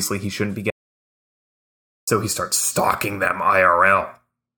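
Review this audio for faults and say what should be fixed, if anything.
The input feed was likely lost, through a dropped device link or a stray mute, while recording continued writing silence. The result is an audio dropout to silence from 0.70 to 2.07 s: after "he shouldn't be" the speech cuts to dead silence with no room tone, resuming at "he starts stalking them", so about 1.37 s is gone. Securing cables and wireless links, locking mute controls and monitoring input levels during capture would prevent it.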